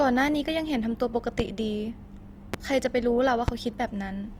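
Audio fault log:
throughout  Opus compression: The speech was likely squeezed through Opus in its music (CELT) mode at a low rate, which fits about 24 kbps. Bands short of bits get filled with folded or noise content, so voiced sounds come out plainly rough and grainy. Bandwidth stays full, reaching 20.2 kHz.
1.40–1.42 s, 2.54–2.56 s, 3.48–3.51 s  loud pop: Each time a brief voltage jump, likely from a switching or driver glitch, lands on the signal for under 30 ms. It is heard as a single sharp pop standing about 15 dB above the speech, which continues underneath.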